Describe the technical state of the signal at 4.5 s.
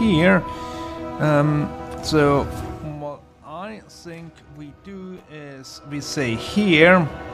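At 4.5 s the signal is intact, with no fault to be heard at that moment.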